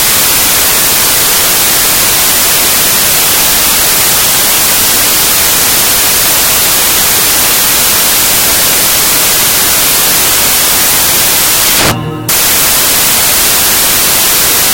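Loud white noise covers the whole clip. It comes from samples built from the wrong bytes. Each value is assembled wrongly, so the fast-changing low bits become its large part.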